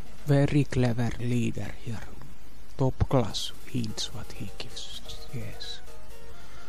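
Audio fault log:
No audible faults found.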